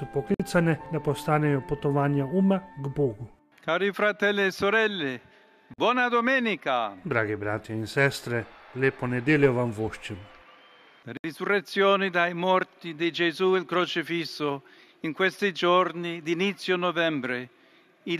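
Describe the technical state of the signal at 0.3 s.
Just after 0.3 s the sound drops out for about 54 ms, from 0.34 to 0.40 s, with smeared edges, then resumes where it stopped. This is a gap at a join of encoded pieces: separately encoded segments were joined without trimming their encoder delay and end-frame padding.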